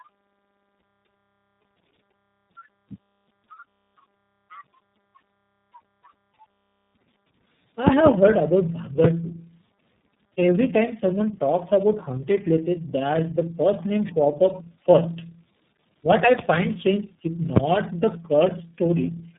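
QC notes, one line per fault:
Throughout: tandem speech coding. The speech sounds like it passed through about three low-rate speech codecs in a row. Each one re-coded earlier damage, leaving it rough, muffled and warbly, with nothing above 3.8 kHz.
7.87 to 8.09 s: loud pop. Two sharp pops stand roughly 25 dB above the speech, which continues underneath. The likely cause is a voltage spike from a plug, switch or static discharge.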